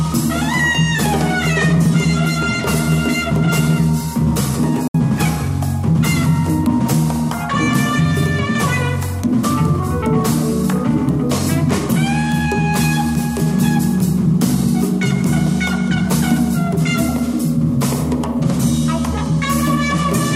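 The sound cuts out abruptly, with a very quick fade, from 4.88 to 4.95 s: a digital broadcast dropout, where the receiver muted for about 64 ms, consistent with two lost frames.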